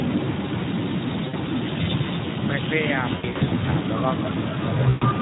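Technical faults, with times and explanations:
throughout Speex codec: the low-rate speech coder starves the excitation of bits, which fits roughly 11 kbps, so speech comes out audibly noisy, hoarse and rough.
throughout echo leak: a delayed copy of the speech trails about 226 ms behind, about 10 dB down, likely from a loudspeaker echo that the far end's canceller missed.
1.27–1.35, 3.15–3.53, 4.89–5.06 VoIP packet loss concealed by the speech codec: lost packets (60 ms; 240 ms scattered, longest 80 ms; 120 ms) were extrapolated by the decoder into a fading buzzy tone or coloured noise, smearing the speech.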